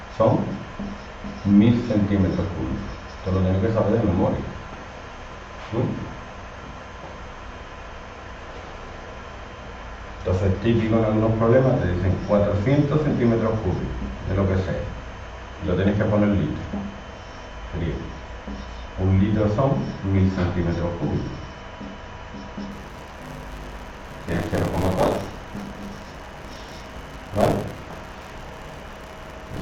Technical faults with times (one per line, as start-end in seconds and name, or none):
22.71-29.61 buffer tearing